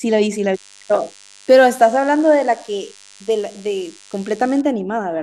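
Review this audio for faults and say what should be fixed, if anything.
DECT cordless phone buzz from 0.55 to 4.62 s, about 30 dB below the speech. Rectified 100 Hz radio bursts make it thinner and buzzier than mains hum. Keeping DECT handsets and bases away from the recording chain prevents it.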